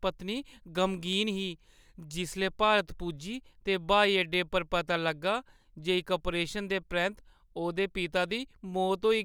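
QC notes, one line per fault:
1.13 s and 4.34 s, dropped samples: a single sharp click at each point. It is likely a handful of missing samples, so the waveform jumps abruptly.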